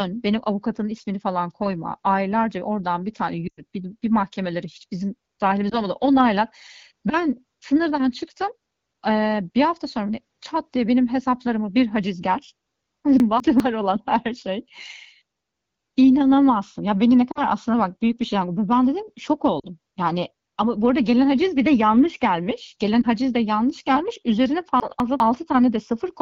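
A speech clip carried over AMR wideband (HD Voice), with light codec damage and the band above 6.4 kHz filled with shaped noise. Lost AMR speech frames hit at 3.47 s (a 100 ms run), 5.70 s, 17.31 s, 19.59 s and 23.02 s. The decoder stretches the last good frame with falling gain, which shows as smeared, fading harmonics and a brief amplitude dip. Chunks out of order occur at 13.2 to 13.6 s and 24.8 to 25.2 s, where a 200 ms block plays one chunk late. The result is jumbled sound, seen as hard vertical discontinuities in the waveform and spectrogram.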